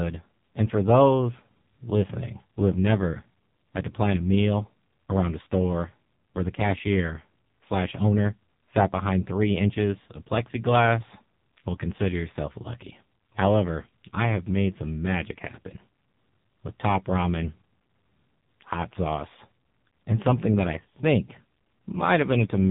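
AMR narrowband mobile codec, throughout: nothing above 3.8 kHz survives, and speech rebuilt from sparse pulses through a vocal-tract model sounds heavily buzzy and synthetic, fitting roughly 6 kbps.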